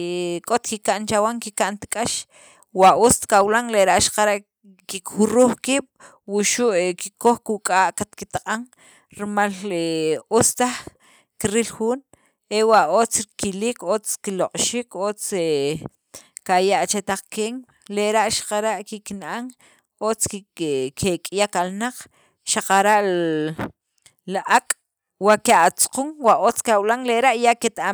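Listening through this speech recording, nothing stood out as a technical problem at any point.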